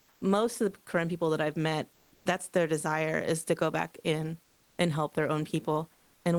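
From 0 to 0.21 s, before "most of the", comfort noise stands in for the background. It is flat, featureless and about 3 dB quieter, likely from discontinuous transmission. At 1.92 to 2.25 s, after "people that I've met", sound is dropped by the voice detector. About 140 ms of speech gives way to comfort noise, likely because the detector mistook the sound for background. Comfort noise returns at 4.43 to 4.78 s, after "to go back in", about 3 dB down. It comes back again at 5.93 to 6.25 s, about 5 dB down. Both likely come from transmission pausing.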